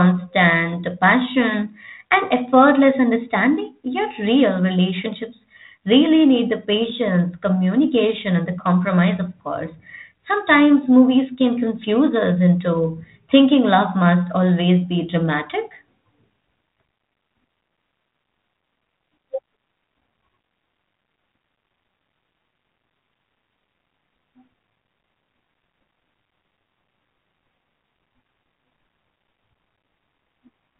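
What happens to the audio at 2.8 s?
Nothing goes wrong at 2.8 s: the speech carries on intact through that moment, band-limited to about 3.8 kHz by the 32 kbit/s G.726 ADPCM telephone coding it passes through, with no break or added damage.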